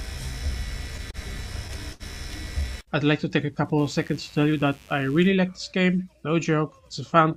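Two short stalls from late packets occur, at 1.11 to 1.17 s and 1.93 to 2.03 s. The receiver held the last sound for about 30 ms, then 69 ms, and resumed without loss. Mains buzz runs from 3.79 to 5.28 s. It is a raspy 50 Hz hum with spiky harmonics, sitting well below the main sound.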